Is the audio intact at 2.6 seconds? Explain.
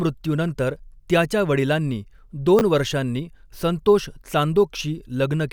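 No. At 2.59 to 2.61 s, between "त्याच्या वडिलांनी" and "वर्षांनी संतोष", the speech has chunks out of order. A 10 ms block of audio was delivered one chunk late, so it plays after the block that should have followed it. Nothing is missing, but the sequence is swapped and three abrupt seams are introduced. In this speech the result is a brief jumbled flicker.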